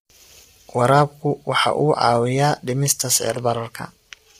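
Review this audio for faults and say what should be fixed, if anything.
Throughout the speech the voice sounds rough and grainy, with noise filling the gaps between harmonics and a dull, synthetic top band. This is likely low-delay AAC compression (AAC-ELD), whose short frames resolve pitch harmonics poorly, here at heavy damage that fits roughly 24 kbps. Raising the bitrate or using a longer-frame codec where delay allows would prevent it.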